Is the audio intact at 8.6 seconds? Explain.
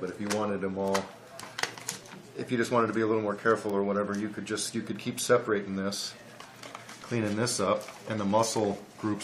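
No. A bit error spike at 8.57 s: one flipped bit throws a single sample off by a power of two, heard as one sharp, broadband tick.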